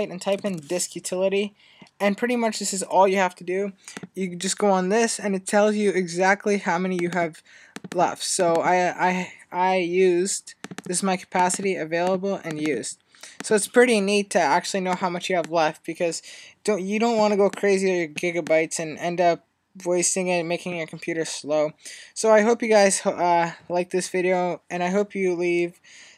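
No technical faults are audible anywhere in the recording.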